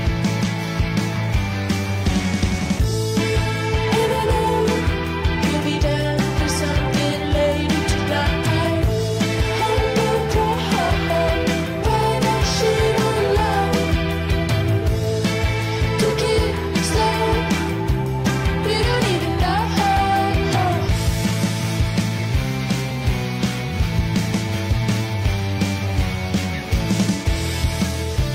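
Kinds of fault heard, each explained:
No kinds of fault are heard in the clip.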